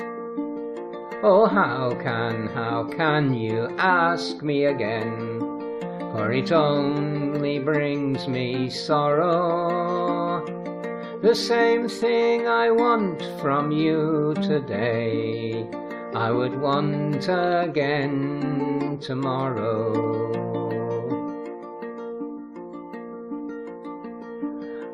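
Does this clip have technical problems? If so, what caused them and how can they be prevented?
No, this clip has no technical problems, so there is nothing to prevent.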